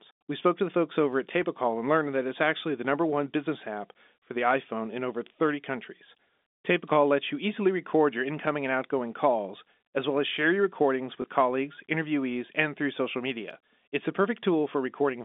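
At 11.22 to 11.24 s, between "as share your recordings" and "colleagues interviewees and through", there is packet loss with the last packet repeated. About 20 ms of audio went missing, which fits a single lost packet. The receiver replayed the previous packet instead. It sounds like a small blip. The telephone band of the G.711 line stays audible around it.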